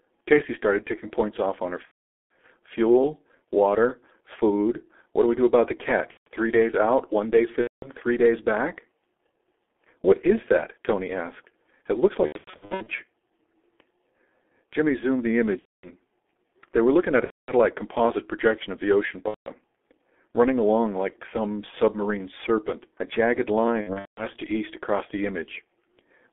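Throughout the speech, the G.723.1 codec at about 6.3 kbit/s confines the sound to roughly 250 Hz to 3.4 kHz and smears it heavily. Unlike a cleaner narrowband phone line, its slow-updating model leaves a hoarse, muffled tone with consonants blurred together.

VoIP packet loss concealed by the speech codec hits at 1.85–2.31, 6.11–6.27, 7.61–7.87, 12.26–13.02, 15.59–15.90, 17.24–17.52, 19.28–19.51 and 23.81–24.27 s. The decoder covers the first lost frames of each gap with a fading continuation of the previous sound, then mutes it from the third lost frame in a row. The gaps at 12.26 and 23.81 s are broken into scattered bursts.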